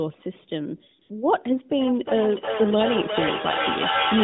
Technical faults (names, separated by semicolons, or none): AMR comfort noise; feedback echo between two devices